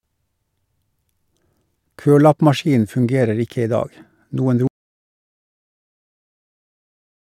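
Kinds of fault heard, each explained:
Audio dropout to silence: the input signal was likely lost while the recorder kept writing silence, so the speech cuts off mid-flow at 4.67 s and the final 2.6 s are complete silence, with no room tone underneath.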